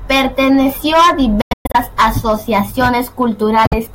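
Between 1.41 and 1.76 s the speech breaks into several silent holes, about 255 ms lost in all, the longest about 116 ms; a second 46 ms hole falls at 3.67 s. This is likely a Bluetooth dropout: the speech resumes further on rather than pausing.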